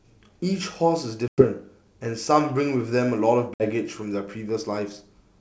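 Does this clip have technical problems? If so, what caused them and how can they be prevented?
Yes. The speech drops into hard-edged silence at 1.28 to 1.44 s and again at 3.54 to 3.64 s, then comes back briefly with some distortion. This is packet loss on an ADPCM call: roughly 100 ms and 60 ms of packets went missing, and the decoder's predictor and step size drifted from the sender's until they resynchronised. A jitter buffer with packet-loss concealment and decoder state reset, or forward error correction, would prevent it.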